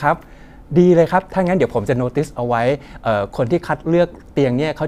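Nothing goes wrong anywhere in this bit of speech, so there's no fault to point to at any moment.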